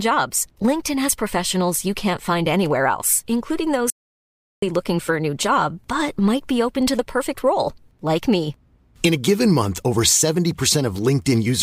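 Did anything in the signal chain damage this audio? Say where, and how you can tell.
Yes. An audio dropout to silence from 3.90 to 4.62 s, after "find anywhere else including", likely from a lost input link. Silence was recorded, so the waveform goes flat and the spectrogram goes black with no room tone.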